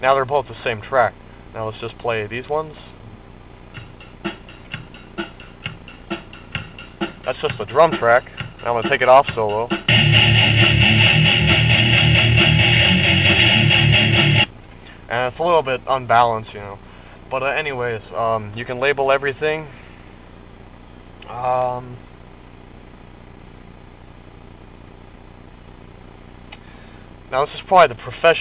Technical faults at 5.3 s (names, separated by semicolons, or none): none